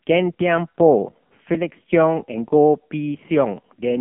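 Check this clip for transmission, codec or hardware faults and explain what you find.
One codec fault runs through the whole speech clip. AMR narrowband mobile codec: heavy damage throughout, band held to about 150 Hz to 3.4 kHz. A pulse-excited vocal-tract model at a low-bit mode, which fits roughly 6 kbps, makes the voice buzzy and synthetic.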